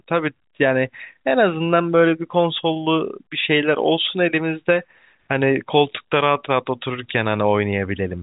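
No faults to report: the speech arrives over G.711 telephone coding, band-limited to 3.8 kHz, with at most the faint level-following quantisation noise that format carries.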